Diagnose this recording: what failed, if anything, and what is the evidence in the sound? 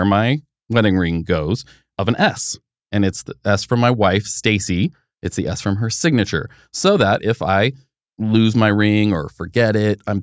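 Nothing failed in this speech recording, and none of the stages from wiring through playback leaves any audible trace of trouble. There is no evidence in the sound of anything that needs diagnosing.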